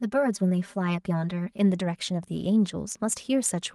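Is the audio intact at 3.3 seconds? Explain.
Yes, the audio is intact at 3.3 seconds, with no fault at that moment.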